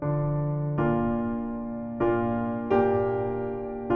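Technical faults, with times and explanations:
No technical faults are audible anywhere in this audio.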